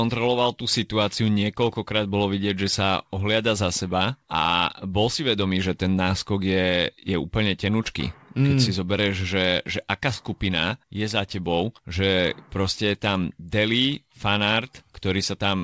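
No technical faults are present in this speech; it comes through a working call path whose content stops at 8 kHz, which fits a wideband codec such as G.722.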